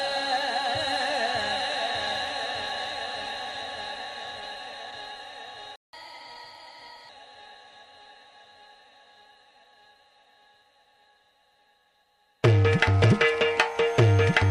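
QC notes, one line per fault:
5.76–5.93 s, playback stall: sound cuts out for 0.17 s, then resumes; likely the player ran out of data or its thread was blocked.
5.93–7.09 s, catch-up at higher speed: the backlog is resampled to play 1.15 times faster, raising the pitch by about two semitones to recover the lost time.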